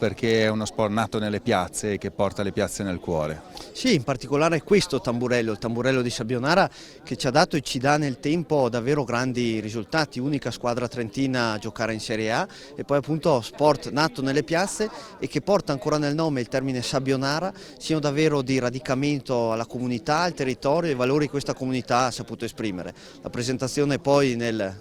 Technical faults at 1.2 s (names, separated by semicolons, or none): block size mismatch (truncated)